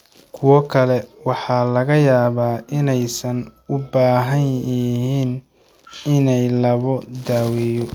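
No technical faults can be heard anywhere in this speech recording; the signal stays intact and continuous throughout.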